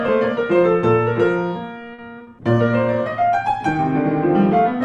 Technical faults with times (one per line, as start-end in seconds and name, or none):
1.93-2.00 short stall from a late packet
2.18-2.30 short concealed packet loss
2.43-4.82 call bitrate drop